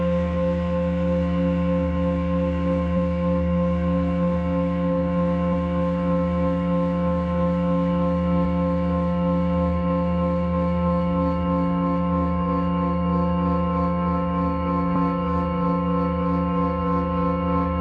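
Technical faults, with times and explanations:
2.93 s, 5.48 to 5.51 s and 14.91 to 14.97 s: damaged data in a compressed stream. Each is a brief chirp or blip. Corrupted bytes make the decoder misread those frames and lose sync. It then hunts for the next valid frame header.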